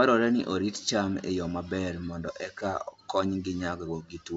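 No technical faults can be heard in this speech. It carries the band-limited sound of G.722 wideband telephone coding at what sounds like 64 kbit/s, with nothing above about 7.8 kHz and at most a faint trace of the coding.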